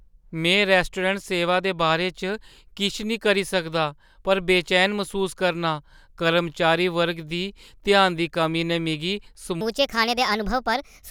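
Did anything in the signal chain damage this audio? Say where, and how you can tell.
Yes. There is a section at the wrong speed, from 9.61 s to the end of the clip. At that point the speech suddenly runs hurried and high. Speed and pitch rise together, by a factor of 1.36, which lifts the voice roughly five semitones. Nothing is time-stretched, so the timing and the pitch shift as one. The likely stage is playback or editing, where this last stretch was clocked at the wrong rate.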